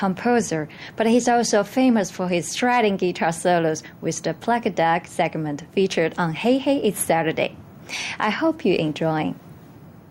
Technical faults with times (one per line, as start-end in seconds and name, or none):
0.00-10.11 gain pumping